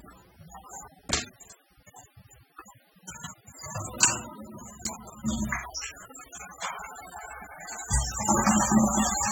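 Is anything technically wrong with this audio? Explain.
Yes. For the whole clip the sound is audibly degraded: it has a dull, smeared quality, with a warbling, fizzy texture on sustained and hissy elements, and nothing is present above about 18.9 kHz. This is likely AAC compression, from the AAC-LC codec at a low bitrate, which the damage suggests is around 27 kbps. At that rate the encoder quantises its frequency lines coarsely against a hearing model, dropping or roughly approximating detail it judges less audible, which produces the smearing and the top-end cut-off.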